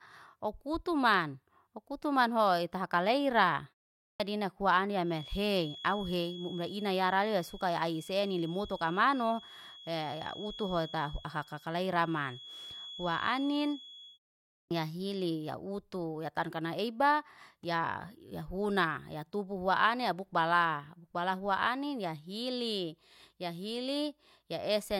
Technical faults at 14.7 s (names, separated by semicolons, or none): clipped start after a pause